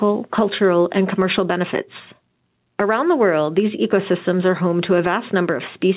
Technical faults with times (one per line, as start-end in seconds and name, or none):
0.00-5.97 gain pumping